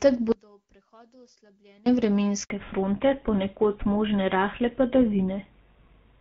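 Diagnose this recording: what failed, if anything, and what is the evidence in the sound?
From 0.32 to 1.86 s the speech collapses by about 32 dB, leaving just a faint residue where the centred voice should be. That's the signature of one channel inverted: the two sides are nearly identical, so when they get summed to mono they cancel and only the small left-right difference survives. Most likely a polarity swap in the analogue wiring or a mis-set channel in the playback chain.

At 2.44 s there's a clean 60 ms hole: the voice drops out fast and comes back at 2.50 s with nothing in between. That's a handover gap at the network stage. The call was being passed between networks and no speech frames arrived during the switch, so that slice of audio is simply gone rather than concealed.

Right after that gap, from 2.50 s to the end, the top end is cut off and there's nothing above 4 kHz. The voice goes duller and a bit rougher than the first part, where the AMR wideband (HD Voice) codec at 12.65 kbit/s carried it with only light coding damage. 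That's a fallback to narrowband at the codec stage, and the sound points to something like GSM full rate taking over after the handover.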